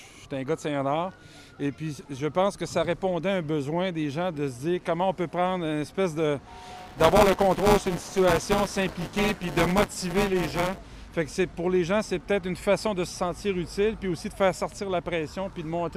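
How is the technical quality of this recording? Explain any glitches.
One glitch affects the recording. Buffer tearing from 6.77 to 10.78 s: writer and playback pointers collide each period, splicing roughly a sixth of every 256-sample buffer with audio from about 10 ms earlier, causing a hard-edged 188 Hz robotic buzz.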